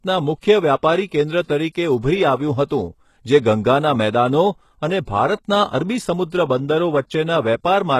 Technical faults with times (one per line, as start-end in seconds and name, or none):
0.00-7.99 HE-AAC compression